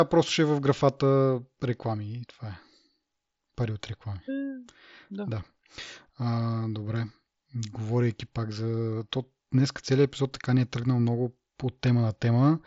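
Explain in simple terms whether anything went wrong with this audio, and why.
Nothing went wrong with this speech recording.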